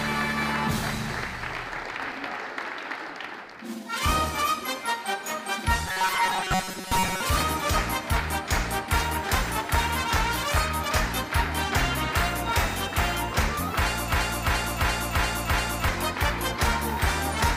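From 5.86 to 7.21 s the sound turns into a rigid, metallic buzz pinned at 188 Hz: robotic sound from repeated short buffers. Audio likely arrived too seldom, so a roughly 5 ms fragment was replayed in place of most of the missing material.

From 14.12 to 15.89 s a 0.34 s fragment plays five times back to back, a broken-record loop. The likely cause is a stall in the player, encoder or stream, which kept resending its last piece while the audio due in that span was lost.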